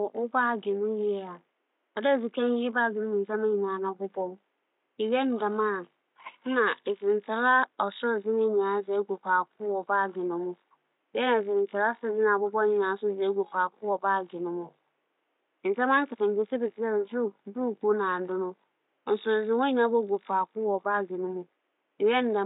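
No technical faults can be heard in the recording. Room noise sits far beneath the speech, about 51 dB lower, as a quiet part of the recorded space.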